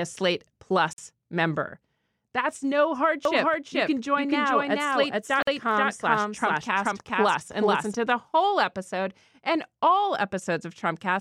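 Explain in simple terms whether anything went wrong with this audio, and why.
Two things went wrong in this speech.

At 0.93 s and again at 5.42 s, the sound briefly drops out for about 50 milliseconds. This is a gap at a join of encoded pieces: the recording was saved in separate chunks and stuck together, leaving each chunk's built-in silence in place. Unlike a true dropout, nothing is lost, and the speech resumes exactly where it stopped.

From 3.25 s to 7.94 s, just before "to the whole episode", a doubled audio track plays a second, equally loud copy of the speech about 0.4 seconds behind. This is likely a second recording path or an editing slip. Unlike a room echo, the copy doesn't fade away, and it starts and stops abruptly.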